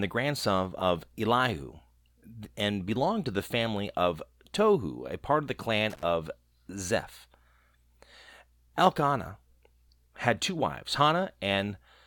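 At 5.9 s, just after "a part of the", the speech breaks up into loose connector crackle lasting about 130 ms, to 6.03 s. A worn or dirty contact in the signal path is intermittently losing and regaining contact, so the audio is chopped on and off in rapid succession, and any DC present on the line turns each break into a pop. The result is a short, irregular burst of scratchy crackle over the speech.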